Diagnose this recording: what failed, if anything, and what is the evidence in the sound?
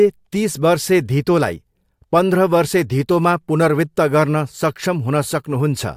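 Nothing failed; no fault is audible anywhere in this recording.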